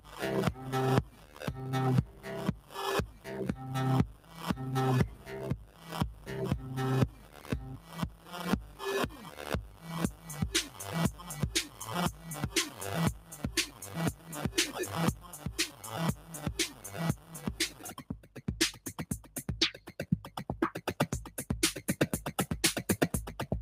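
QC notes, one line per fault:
Throughout: noise suppressor applied to music or sounds. A speech-oriented noise suppressor stayed engaged and kept judging steady, sustained parts of the audio as noise. Its gain rides up and down by around 15 dB, so onsets mostly come through while held sounds and decays are pulled down behind them. The result is audible pumping and a thinned, fluttering body wherever the sound sustains instead of striking.
0.0–5.92 s, 7.19–14.32 s, 15.3–20.92 s: sound cut by the noise suppressor. In these three stretches the suppressor clamped down harder on material it mistook for noise, cutting it by about 12 dB at worst in the first span and about 11 dB in the other two. The dips add up to about a second and a half in the first span and about two seconds in each later one. Sustained passages sag and tails are cut short, while sharp transients largely survive.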